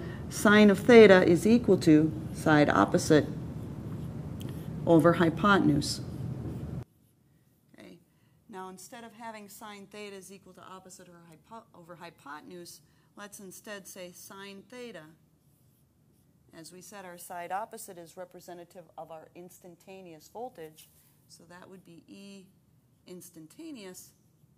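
From 6.83 s to the end, the sound collapses to a faint trace, about 26 dB down, with the centre gone. That's likely one channel inverted: reversed polarity on one side cancels everything the two channels share once they're summed.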